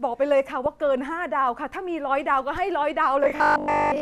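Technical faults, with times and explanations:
0.66 to 0.79 s, DAB burbling: for about 0.13 s the speech is disturbed by burbling blips of noise, as bit errors slip past error correction into the MP2 data and corrupt sample values and scale factors, making individual sub-bands jump in level from one frame to the next. The run of damage points to several consecutive frames hit at a low error rate. Unlike a repeating-buffer fault, the disturbance is irregular and has no steady pitch.
3.24 to 4.01 s, robotic sound from repeated short buffers: from here to the end the speech turns into a rigid, metallic buzz locked at 50 Hz while still loosely tracing the syllables. The likely cause is audio arriving too slowly, so the player fills the gaps by replaying its last short chunk. A 50 Hz buzz fits a 20 ms repeat, and most of the real audio appears to be skipped. Unlike the burbling, this has a constant, tonal pitch rather than random squelches.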